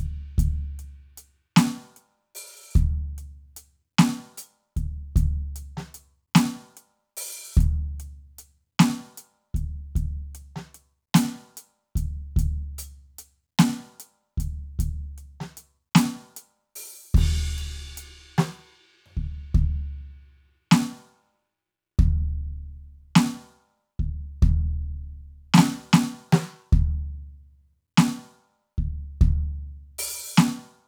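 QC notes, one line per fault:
The music signal stays continuous across the whole clip, free of faults, with consistent timing and nothing interrupting the audio path.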